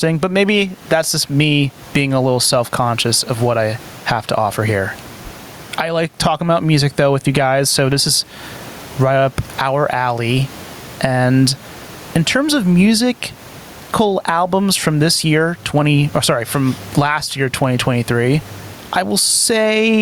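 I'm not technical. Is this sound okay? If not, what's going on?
No. Gain pumping runs through the whole recording. There is also some quiet room noise in the background, which is normal. The microphone level was likely set far too high, so an automatic limiter keeps pulling it down. Loud and quiet speech end up squashed together.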